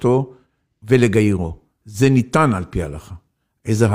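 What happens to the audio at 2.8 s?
At 2.8 s the speech is inside an adaptive-stream drop to a lower bitrate, running from 1.38 s to the end. The player switched renditions mid-stream without a gap, and codec artefacts rise. That fits HE-AAC, which uses spectral band replication, at about 40 kbit/s, replacing AAC near 96 kbit/s.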